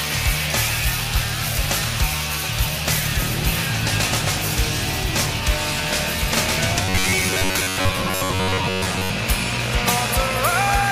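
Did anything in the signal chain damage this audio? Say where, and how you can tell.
Yes. From 6.85 to 9.10 s the sound collapses into a rigid, metallic robotic buzz at 93.8 Hz, the signature of repeated short buffers. This likely happens at the driver or buffer stage: audio arrives too slowly, so the last block of about 10.7 ms is replayed over most of that stretch while fresh material is skipped. A spectrogram shows evenly spaced harmonic stripes at multiples of 93.8 Hz, and the waveform shows identical short cycles.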